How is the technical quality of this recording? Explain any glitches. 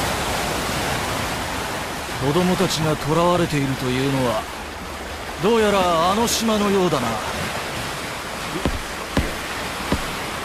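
No glitches are audible anywhere in the recording, so there is nothing to explain.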